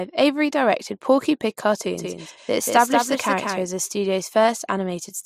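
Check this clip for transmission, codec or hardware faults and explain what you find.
One fault: a doubled audio track from 1.98 to 3.66 s. A second copy, about 5 dB quieter, trails about a fifth of a second behind, likely from a slower capture path, and it starts and stops abruptly with no decaying tail, unlike echo.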